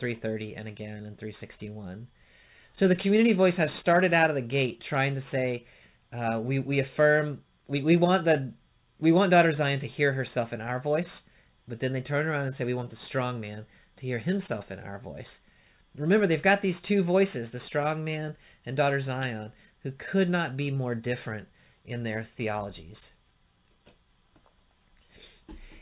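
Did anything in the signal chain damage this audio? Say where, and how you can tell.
No, nothing stood out on listening that would point to damage at any stage of the chain.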